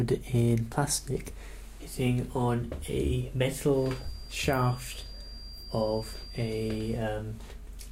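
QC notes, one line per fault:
3.68–7.06 s, feedback whistle: a thin, steady 4.8 kHz tone, about 20 dB under the sound, swells and fades slowly; likely a speaker-to-microphone loop held just at feedback.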